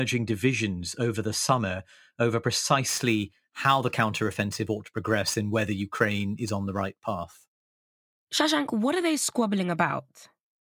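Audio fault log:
2.88–7.46 s, after "over the summer over": crude rate conversion. Samples are dropped without filtering, likely a 48 kHz to 44.1 kHz change. This adds a gritty, inharmonic fizz roughly 25 dB below the speech.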